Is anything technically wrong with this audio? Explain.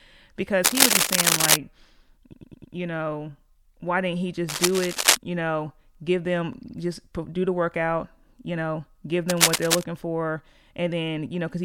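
Yes. The speech has two kinds of fault.

Cable scratch noise appears three times: 0.64 to 1.56 s, 4.48 to 5.17 s (just after "know why didn't he"), and 9.29 to 9.83 s. Each time a dense, irregular rustle sits over the speech, somewhat louder than the speech itself. The likely cause is a worn cable or connector being moved, so that its contact resistance jumps about rapidly. This is noise added on top of the audio. Nothing in the speech is repeated or removed.

Repeated frames occur at 2.31 to 2.73 s, just before "you know why didn't". There a slice of about 104 ms plays four extra times, which adds 418 ms. A shorter case runs from 6.65 to 6.76 s, between "know give them" and "just do the workout". There a slice of about 52 ms plays twice more, which adds 104.5 ms. The decoder received the same run of compressed frames again, so the result is a mechanical stutter. Unlike the scratching, the intruding sound is a copy of the speech itself, repeated at a fixed rate.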